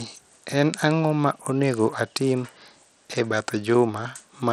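Throughout the speech, the treble flickers and drops out under a gritty, aliased haze, likely Bluetooth SBC compression starved of bits, which fits a low bitrate near 80 kbps.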